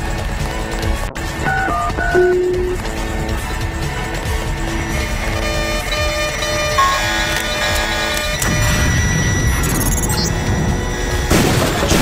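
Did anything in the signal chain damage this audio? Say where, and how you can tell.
Yes. A call bitrate drop hits the codec stage from 1.08 to 5.77 s. The bandwidth estimate fell and the encoder went from about 128 to 11 kbps, holding the lowest rate for 1.87 s. Coarser coding and lost high frequencies degrade the sound until it recovers at 5.77 s.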